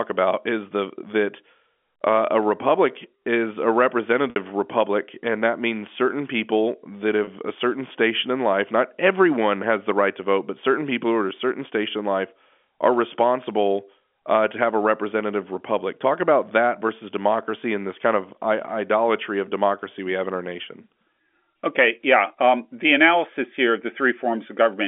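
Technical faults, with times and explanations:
4.30 to 4.36 s and 7.24 to 7.27 s, packet loss with pitch repetition: audio drops out just before "republic and that means" (60 ms) and again between "means certain people that" and "a certain station in" (30 ms). Repeating the last pitch cycle covers each gap, so you hear a brief held buzz, which in the longer gap fades to silence just before the speech returns.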